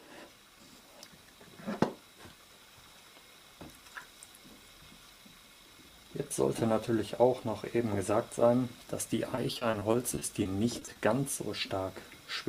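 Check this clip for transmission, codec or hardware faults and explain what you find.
There is one fault. From 9.35 to 10.97 s, repeated packet loss (robotic sound) occurs. Short dropouts of up to 20 ms are patched by extending prior sound, covering 15% of the stretch and giving choppy audio with pieces missing.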